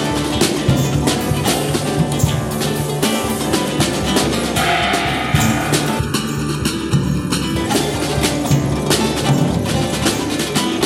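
From 5.99 to 7.56 s, channel delay comb filtering: one channel lags under a millisecond, so the mono sum sounds hollow, notched from about 700 Hz.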